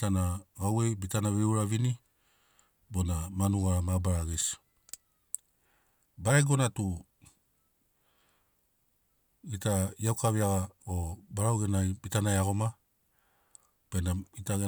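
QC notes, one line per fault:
No audible faults detected.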